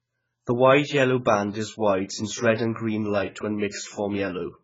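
From start to finish the speech has passed through a codec starved of data, most likely AAC compression at a very low rate; the damage fits something around 12 kbps. With so few bits per frame, the encoder throws away the upper band entirely, leaving nothing above 7.6 kHz, and coarsely quantises what remains. The voice comes out dull and heavily smeared, with sibilants and held vowels taking on a warbling, fizzy texture.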